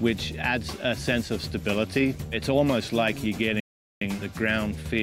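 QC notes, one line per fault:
3.60–4.01 s, rebuffering stall: playback drops to silence for about 0.41 s, then picks up exactly where it stopped, with nothing skipped. The player exhausted its downloaded audio and waited for more data, so the gap adds time rather than removing material.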